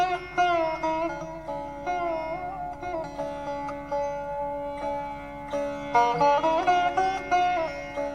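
No technical faults can be heard anywhere in the recording.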